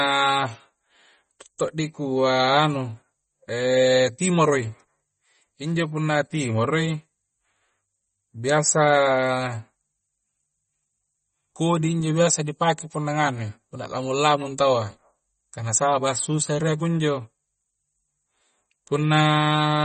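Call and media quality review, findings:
Watery, swirly speech throughout, treble gone above 8.4 kHz; likely MP3 compression at a low bitrate, around 32 kbps, starving weak frequency lines and cutting the top band.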